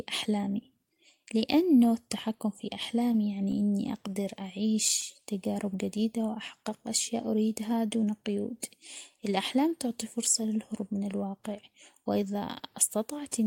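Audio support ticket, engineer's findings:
Scattered short gaps, 3.02 to 4.26 s, right after "لأنه التحكم في": about seven tiny ticks and smears, longest around 15 ms. Receiver concealment patching lost or late packets by extending the last sound.

Jitter buffer speed-up, 7.77 to 8.28 s, after "جديدة وأحقق أشياء": speech rushes to 111% speed at the same pitch. Buffer overfilled, so roughly 70 ms of pitch periods got trimmed out.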